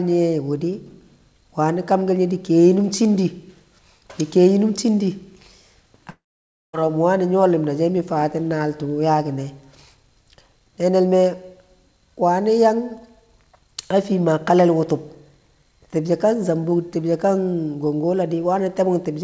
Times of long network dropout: 6.10-6.75

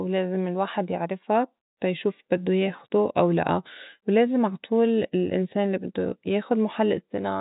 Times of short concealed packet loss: none

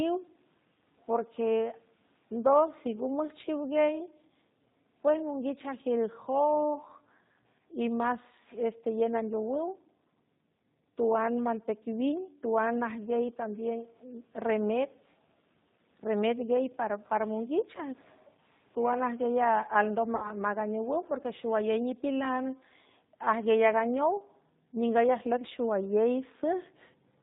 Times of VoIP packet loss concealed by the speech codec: 20.16-20.32

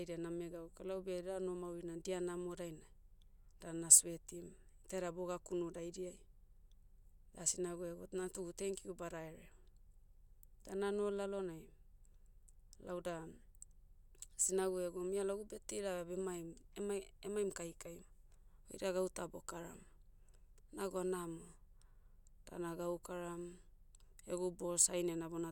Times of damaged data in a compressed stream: none

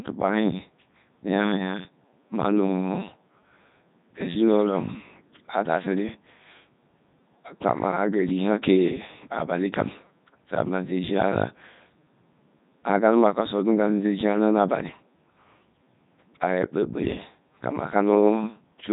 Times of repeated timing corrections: none

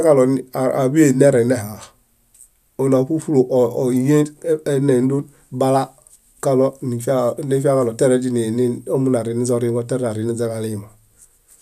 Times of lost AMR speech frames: none

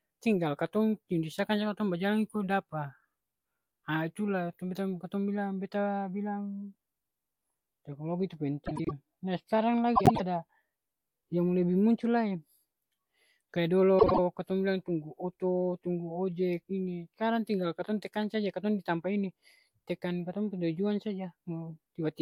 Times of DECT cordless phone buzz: none

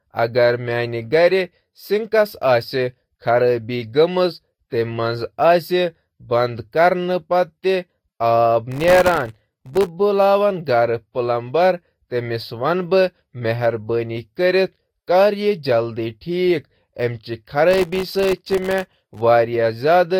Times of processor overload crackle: 8.72-9.88, 17.71-19.20

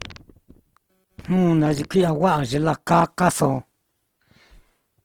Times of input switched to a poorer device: none

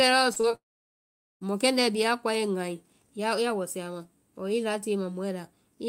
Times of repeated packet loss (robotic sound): 0.33-0.55

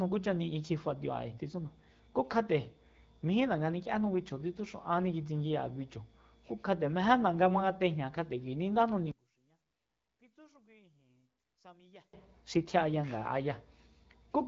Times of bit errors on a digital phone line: none

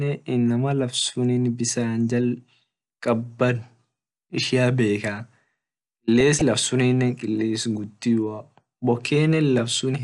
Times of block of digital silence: none

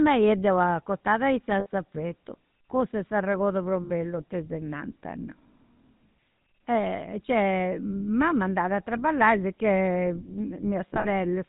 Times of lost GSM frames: 1.60-1.66, 3.84-3.91, 10.88-11.07

